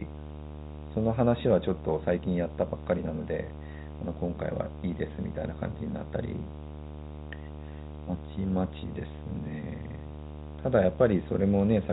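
Speech heard through a telephone-band channel, with video or display buzz running throughout: a 75 Hz field-rate buzz with hash above it, roughly 10 dB below the speech, from a screen or video cable coupling into the audio.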